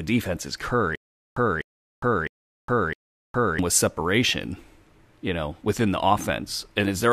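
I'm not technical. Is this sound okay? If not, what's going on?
No. From 0.95 to 3.59 s, after "defense is", the speech sticks: a 0.25 s snippet repeats four times, each followed by 0.41 s of silence, until "with separation". This is stutter with silent gaps, likely a stalled player replaying its last fragment. The speech from that stretch is lost.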